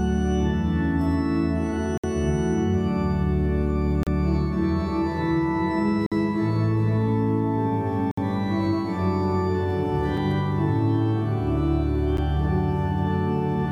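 Segment timestamps in a stream cut into 2-second pieces leave a gap between stream segments, filled with silence. The sound stops with hard edges at 1.98–2.04 s, 4.03–4.07 s, 6.06–6.12 s, 8.11–8.18 s, 10.17 s and 12.17 s, for 4 to 61 ms, losing no audio.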